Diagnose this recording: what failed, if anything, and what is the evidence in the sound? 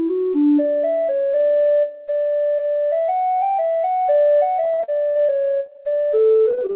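The network leg is where this fell apart, with repeated packet loss producing that robotic sound in two bursts: 4.64 to 5.30 s, then 5.66 s through to the end. In each stretch the jitter buffer keeps running out and patches each hole by extending the last bit of sound, giving a choppy, robotic texture. Roughly a third of the first burst and a quarter of the second is concealment, with gaps up to 54 ms and 39 ms. The whole thing sits in a narrowband call band, with nothing above 4 kHz, which fits G.711.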